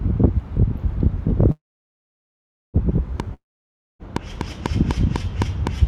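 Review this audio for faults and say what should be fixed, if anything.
From 1.51 s to 2.77 s the sound stops and hangs in a brief fading buzz, then near-silence for about 1.15 s, before resuming exactly where it left off. This is a call audio freeze, likely delayed packets draining the jitter buffer, adding about 1.2 s of gap without losing anything. A larger adaptive jitter buffer and a steadier network path would prevent it.

From 3.2 s to the end, a regular ticking of about 4.1 clicks per second sits over everything, with peaks well above the sound itself. This train of clicks likely comes from interference from nearby equipment or a faulty connection or power supply injecting similar pulses. Shielding or relocating cables and equipment, or fixing the connection or power supply, would prevent it.

From 3.34 s to 4.02 s the sound breaks into a short fading hiss, then about 0.59 s of silence, and picks up later with material skipped. 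This long network dropout was likely caused by packets failing to arrive, and about 0.66 s of audio was never played. A more reliable connection or packet redundancy such as forward error correction would prevent it.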